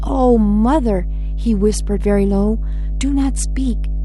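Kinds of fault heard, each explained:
Mains hum: A steady low tone sits under the speech from start to finish. It is at 50 Hz, the frequency of the power line. It gets into the audio through a ground loop or from a nearby transformer, which lets the supply leak into the signal path. Here the hum is very loud, only a little below the speech itself. It does not fade or change, so it stays clearly audible even while the speaker is talking.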